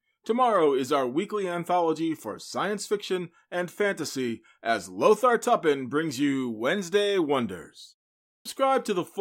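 A speech recording with one clipped start after a pause: at 8.32 s, following a silence of about 0.46 s, the first 134 ms of the next utterance is missing, so the sound resumes at 8.45 s already mid-onset. The output path appears to have idled during the gap and needed that long to wake before passing audio again. On a waveform the trace jumps from flat straight to speech level with no rise; a spectrogram shows energy appearing as a sharp vertical edge.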